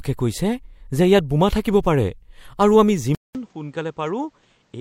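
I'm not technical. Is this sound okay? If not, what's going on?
No. At about 3.15 seconds the recording likely switched its input to a poorer device, such as a different microphone or a headset. Right at the change there's a brief gap of about 0.2 seconds. From then to the end, the speech sounds duller and boxier because nothing above 8.6 kHz comes through, the speech is noticeably quieter, and a faint new background noise appears underneath it.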